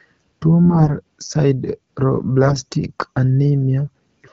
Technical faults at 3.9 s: none

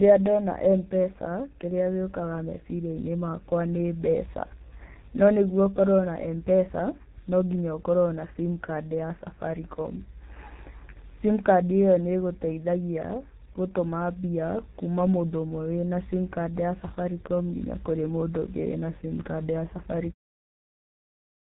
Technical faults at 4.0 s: G.723.1 codec

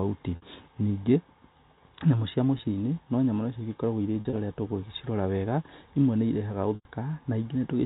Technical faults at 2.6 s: packet loss with pitch repetition

